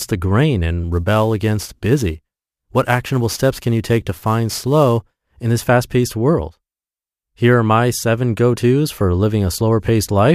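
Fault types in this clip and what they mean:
Sample clock jitter: an unsteady converter clock mistimes samples, adding roughly 10 µs of timing error. From 0.92 to 5.52 s, hiss rides on loud, bright speech.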